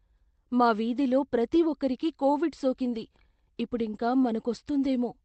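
A speech clip whose sender clock runs roughly 1.5% slow, so clock drift between sender and receiver keeps the receiver's buffer draining throughout, with small timing slips appearing along the waveform. Repeated timing corrections from 0.02 to 4.24 s repeat short pieces, slowing the speech to about 98% and adding roughly 70 ms in total. They show as faintly duplicated segments and unevenly spaced seams in the waveform. On a spectrogram, the call codec's output stops at 8 kHz.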